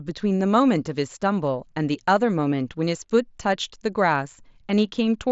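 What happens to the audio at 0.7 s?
At 0.7 s the speech carries on intact, with no dropout, click or other break, only the steady wideband Bluetooth mSBC headset codec band limit that stops the sound at about 7.7 kHz.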